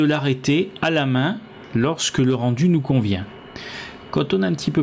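Throughout the clip there is gain pumping, most likely from input gain set far too high with a fast limiter or compressor clamping down on every loud moment. The level swings by roughly 15 dB, so loud and quiet passages sit unnaturally close together and everything sounds squashed. Behind this, the call microphone processing has trimmed the lowest bass and leaves nothing above 8 kHz.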